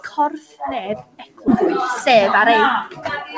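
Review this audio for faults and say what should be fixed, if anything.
A skip ahead at 1.48 to 1.50 s jumps the speech forward with no gap, dropping roughly 0.7 s. Audio that had piled up in the jitter buffer was discarded to cut the delay, so the two sides are spliced directly. To prevent it, let the jitter buffer shrink gradually with time-stretching instead of discarding queued audio. The G.722 call path's band limit, with nothing above 8 kHz, is present alongside.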